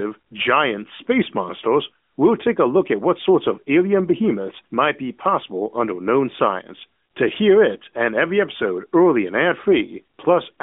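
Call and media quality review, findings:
Nothing stood out on listening, with the speech carried in the narrow mobile band of the AMR narrowband mobile codec, roughly 200 Hz to 3.6 kHz.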